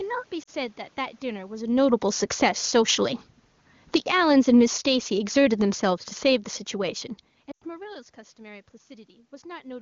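At 0.43 to 0.50 s the speech dips and warbles for about 40 ms, which fits two lost AMR speech frames. Radio errors made the frames fail their checksum, so the decoder bridged the gap by repeating the last good pitch and vocal tract settings.

From 1.62 to 7.07 s the automatic gain falls, sinking the speech and its room background together by about 10 dB. The control judged the input too loud and lowered its gain gradually. A talker movement at about 1.5 s is natural, not a system fault.

Within that span the automatic gain rises twice, at 2.60 to 3.18 s by about 5 dB and at 4.19 to 5.24 s by about 3 dB. Speech and background swell together each time as the control briefly judged the input too quiet and pushed the level back up.

At 7.51 to 7.64 s lost AMR speech frames return as a longer run of about 100 ms, which fits five consecutive frames. The concealed sound drops to near silence within two frames before the speech resumes, briefly weak or rough.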